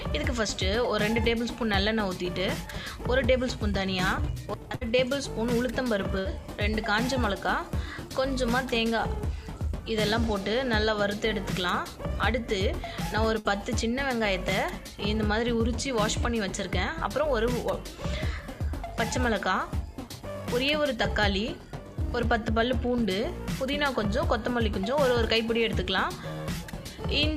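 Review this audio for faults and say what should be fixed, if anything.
Bursts of packet loss at 4.75, 6.19 and 13.39 s: about 60 ms dropped each time, concealed by extending and fading the last sound. Spectrograms show smeared, decaying bands, then abrupt resumption. Larger jitter buffers and forward error correction would prevent this.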